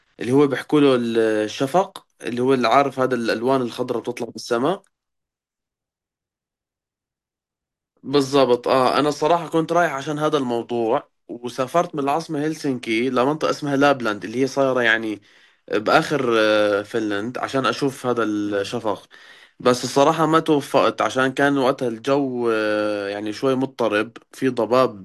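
No technical faults can be heard anywhere in this speech recording. There is nothing in the audio to mark in time order.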